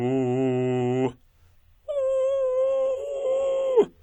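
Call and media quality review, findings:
No faults detected in playback.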